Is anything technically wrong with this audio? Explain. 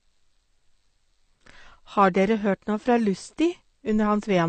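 Yes. Throughout the speech there is plainly audible AAC compression damage, likely from a low-bitrate AAC-LC encode. Nothing remains above 8.5 kHz, so the sound is dull, and the quantised frequency lines leave a smeared, warbling texture that fits a bitrate near 32 kbps.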